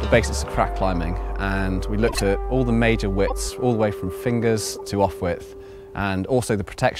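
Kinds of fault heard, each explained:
corrupt frame decoded: Compressed frames with flipped bits were decoded anyway, misreading gains and codes so energy lands at wrong frequencies. This produces three short disturbances, at 2.07–2.21 s, 3.27–3.32 s and 4.72–4.81 s, each spanning a few damaged frames.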